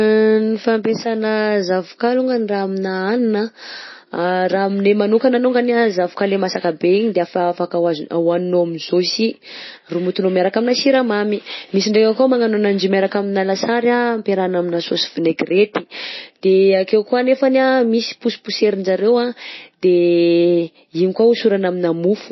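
Throughout, the speech sounds dull and watery, with nothing above 5.8 kHz, which points to likely MP3 compression at a very low bitrate, near 24 kbps.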